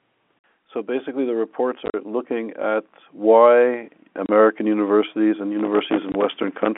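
Automatic gain rising from 0.85 to 3.98 s: the gain control judged the input too quiet and raised its level by about 10 dB, so the speech and background swell together gradually.

Packet loss filled with silence at 1.86 to 1.94 s: 60 ms of audio is missing, broken into hard-edged holes of up to 40 ms. The receiver played silence where lost packets should be, which fits 10 ms packets. Two shorter holes follow, 30 ms at 4.26 to 4.29 s and 20 ms at 6.12 to 6.14 s.

Processor overload crackle from 5.59 to 6.68 s: the processor missed dozens of deadlines for buffers of a few milliseconds each. Every miss left a tiny hard-edged silent gap, and together they produce a gritty crackle that tears through the narrow telephone-band sound and stops when the load passes.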